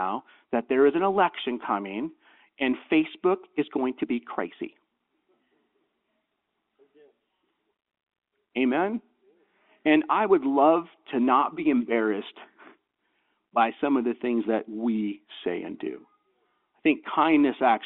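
Nothing goes wrong anywhere in this speech recording; it just has the narrow telephone-line sound of ordinary G.711 coding, with the band running from about 200 Hz up to 3.6 kHz.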